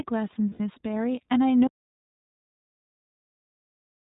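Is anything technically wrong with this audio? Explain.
Yes, there are three technical problems.

Throughout, the speech has gone through the iLBC codec, a narrowband VoIP coder that encodes each frame's excitation independently. Everything above 4 kHz is cut, and the coding damage is plainly audible as a rough, slightly synthetic edge. The character fits the 20 ms frame mode at around 15 kbps.

From 0.50 to 0.60 s there are lost iLBC frames, about 100 ms of missing packets. The decoder fills the hole by repeating the last pitch cycle blended with noise, so a brief held, buzzy vowel replaces the speech before clean decoding resumes almost immediately.

From 1.67 s to the end there is an audio dropout to silence. The sound stops abruptly and is followed by silence with no room tone. The likely cause is a lost input, such as a disconnected device or failed link, while recording carried on.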